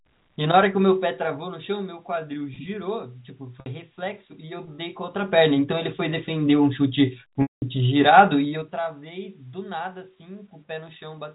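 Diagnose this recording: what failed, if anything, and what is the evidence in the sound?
Zipper noise at the gain stage of the call processing. At 0.85 to 2.05 s the level drops about 10 dB in 1 dB steps. At 5.04 to 5.46 s it rises about 10 dB in 2 dB steps. At 8.36 to 8.79 s it falls about 15 dB in 3 dB steps. Each step lands unsmoothed, about ten per second, and each step ticks.

Packet loss with pitch repetition on the network path. At 3.60 s a 60 ms gap is bridged by a repeated pitch period, heard as a brief held buzz. That fits three lost 20 ms packets. At 7.42 to 7.62 s a 200 ms loss is longer. The repetition fades to silence, and the sound cross-fades back in.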